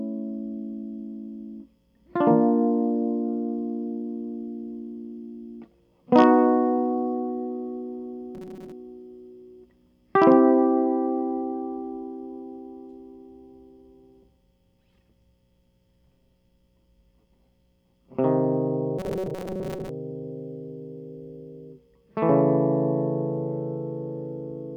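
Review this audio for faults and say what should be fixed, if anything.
The music takes on robotic sound from repeated short buffers at 8.35 to 8.72 s and again at 18.99 to 19.89 s, a rigid metallic buzz fixed at 188 Hz. The likely cause is audio arriving too seldom, so a segment of about 5.3 ms is looped in place of the missing material: roughly half the sound in the first event, most of it in the second. Unlike a dropout, nothing goes silent, and unlike pitch drift, the buzz holds one steady frequency. Preventing it means giving the audio path enough buffering or scheduling priority that new samples always arrive before playback needs them.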